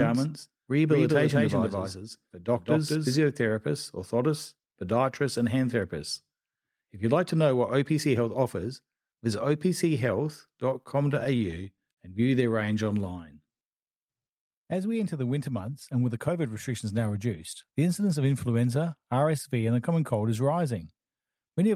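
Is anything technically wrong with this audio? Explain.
Yes, there are four faults in this speech.

Doubled audio track, from the start to 3.16 s. A second full-band copy trails about a fifth of a second behind at roughly the same level, most likely from a slower second capture path. It sounds like a dry, flat echo that stops abruptly.

Repeated stalls (stutter), 10.57 to 11.99 s. Late packets emptied the jitter buffer ten times. The receiver stretched the last sound across 158 ms in total, with the longest wait 51 ms, so nothing is lost but the speech drags and stutters.

Jitter buffer slow-down, 12.66 to 13.54 s. The receiver repeated pitch periods to rebuild its reserve, adding 60 ms. Speech runs at 94% speed with unchanged pitch and sounds drawn out.

Jitter buffer speed-up, 15.60 to 16.46 s, between "we enter the winter" and "restrictions now reduced the". The receiver cut short pitch-period pieces to shrink an overfull buffer, removing about 70 ms. 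Speech runs at 108% speed with unchanged pitch and sounds hurried.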